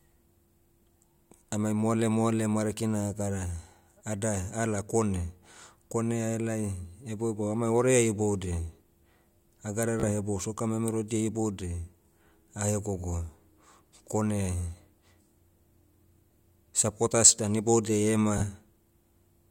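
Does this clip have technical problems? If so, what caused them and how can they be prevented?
Yes. Bluetooth stutter: the wireless link lost or delayed audio packets, so the receiver replayed its last short slice, a brief repeated buzz in the speech at 10.00 s, just before "hebou soccer memerodia", and at 18.38 s, just after "dan iboudiai", each dropping about 30 ms. Keeping the devices close, with a clear path and away from Wi-Fi congestion, prevents these dropouts.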